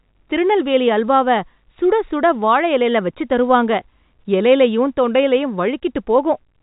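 No technical faults can be heard in this speech clip. It has the narrow band of G.711 telephone coding, with nothing above about 3.8 kHz, which fits the A-law version of the telephone format at 64 kbps.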